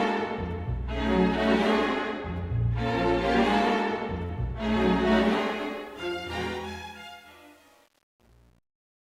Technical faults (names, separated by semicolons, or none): short concealed packet loss; truncation distortion on a fade